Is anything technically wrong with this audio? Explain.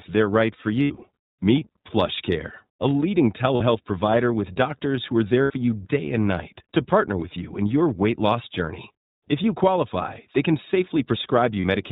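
Yes, there are two problems. The whole clip has gone through the iLBC codec. It's narrowband, so nothing above 4 kHz survives. Each 20 ms frame is coded on its own, which fits the 15.2 kbps mode. The speech ends up plainly rough and a bit synthetic.

There are also lost iLBC frames at 0.82 to 1.04 s, 3.56 to 3.62 s, 5.42 to 5.52 s and 11.60 to 11.65 s. The first one is about 120 ms of loss scattered over 200 ms, with the longest run around 70 ms. The others are shorter: 40 ms, 80 ms and 40 ms. In each gap the decoder loops the last pitch cycle with added noise, so you hear a brief held, buzzy or breathy vowel. The speech snaps back right after each one.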